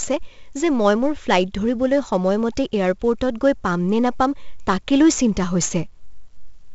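Throughout the speech, heavy 4-bit ADPCM compression codes each sample as a coarse step from a prediction. The result is gritty hiss on loud syllables, smeared onsets, and a hard ceiling at 7.7 kHz, which fits a 16 kHz sample rate. On a spectrogram, level-following broadband noise sits beneath that flat cutoff.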